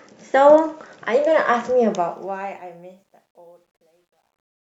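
From 1.85 s to the end, the speech fade-out shows truncation distortion: an undithered stage, which fits about 11 bits, turns the tail gritty, worst from 3.01 s.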